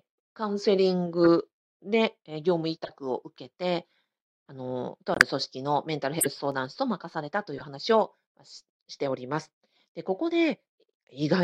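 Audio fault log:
1.24–1.28 s, 2.84–2.90 s, 6.19–6.26 s and 7.58–7.65 s, corrupt frame decoded: each is a short chirp or burst of noise over the speech, lasting 40 to 75 ms, which fits two or three damaged frames per event. Flipped bits in the compressed stream reached the decoder, which played the frames anyway. Misread gains and codes put energy at frequencies the speech never had, and that lasts only as long as the damaged frames.
5.14–5.21 s, corrupt frame muted: the speech stops abruptly for about 70 ms, with no fade in or out, and then resumes. Flipped bits left these frames undecodable, so the decoder rejected them and the player put silence in their place. The gap spans about four frame lengths, which fits a frame of roughly 17 ms. Filling the hole also added 9.3 ms, so everything after this point sits slightly later.
6.38–6.66 s, CD scratch ticks: three regular ticks of uneven strength, each well under a millisecond, sound just after the preceding burst of noise. 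A blemish on the disc destroyed more data on each turn than error correction could rebuild. The player then interpolated or muted those few samples, and that leaves a tiny click at each revolution, repeating at a steady rate across roughly 0.3 s.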